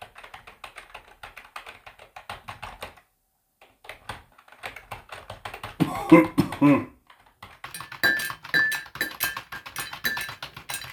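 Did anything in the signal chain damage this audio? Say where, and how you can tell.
Yes, there's a section at the wrong speed from the start to 7.65 s: everything runs at 0.762 times normal speed, so it's dragged and roughly five semitones low, then snaps back. That's likely a playback or editing stage running on the wrong clock.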